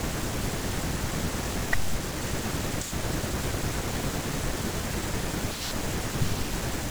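A speech recording with processor overload crackle from 1.44 to 1.88 s. A gritty tearing rides on the sound there. Many short buffers, around 10 ms each, missed their deadlines in a row. About twenty were filled with stale repeated audio, giving hard-edged jumps.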